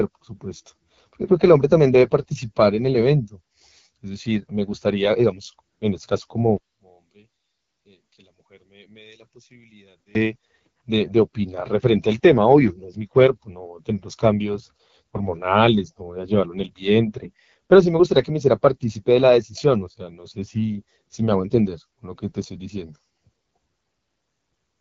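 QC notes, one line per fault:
Throughout: AMR wideband (HD Voice) codec at 8.85 kbit/s, one of its lowest rates, leaves the speech audibly rough and raspy, with a noise-filled top band.
6.57–10.15 s: one channel inverted, likely from a polarity flip in the stereo path. Summed to mono, the centred speech cancels, dropping about 29 dB to a faint residue.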